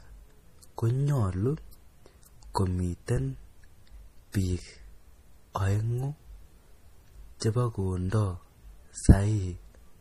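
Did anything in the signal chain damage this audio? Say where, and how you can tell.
Yes, at the codec stage. Throughout the speech there is nothing above 15.2 kHz, and the codec damage is plainly audible: a watery, swirly texture with metallic chirping on sibilants. That points to likely MP3 compression at a low bitrate, consistent with roughly 40 kbps. The encoder runs short of bits, cuts the treble at a fixed point, and drops weak frequency lines frame by frame. On a spectrogram this appears as a hard ceiling at 15.2 kHz with flickering, patchy holes below it.

Pre-echo occurs at about 7.40 s, where a short hiss leads a sharp attack by about 17 ms and softens its onset. A transform codec spreads quantisation noise across its whole block, so noise sized for the loud attack also fills the quiet moment just before it. On a waveform you would see a faint, noisy smear ahead of the transient rather than a clean rise from silence. 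On a spectrogram it shows as a broadband haze just before the onset.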